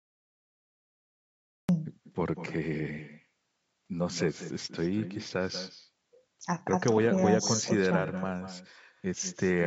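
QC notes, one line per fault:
throughout, echo with no canceller: every phrase is shadowed roughly a fifth of a second later by a quieter, thinner copy about 12 dB down. The far end plays the call over a loudspeaker, its microphone picks that up, and nothing removes it before it returns.
1.69 s, cut-off start: the clip holds digital silence from the top until 1.69 s, when speech appears abruptly mid-sound with no natural attack or fade-in. The recording or stream began late and caught the talker partway through a sound.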